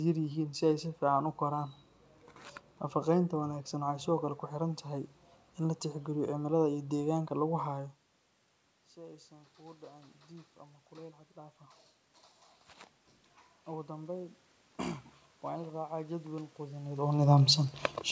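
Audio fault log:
7.70–11.88 s, automatic gain rising: The level drops sharply when the talker moves back from the microphone around 7.5 s, with the input down by about 23 dB. Voice and room noise then swell together for roughly four seconds as the automatic gain control, finding the input too quiet, lifts its gain by about 6 dB. The rise is slow, so much of the drop stays unrecovered, and the background climbs along with the speech.
13.65–17.18 s, automatic gain rising: A second gradual swell follows. Speech and room noise grow louder together over about three and a half seconds as the gain climbs another 6 dB or so. Because the control still hears a quiet input, it keeps raising its gain. The noise floor rises in step with the voice, which shows that this is gain applied to the whole signal and not the talker speaking up.
17.16–18.11 s, automatic gain falling: The talker comes back toward the microphone around 17.0 s. 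Speech arrives loud at first, then it and the background sink together over the final second. The automatic gain control has raised its gain for a distant talker, so the closer, louder input comes through too hot until the control notices and pulls the gain back down.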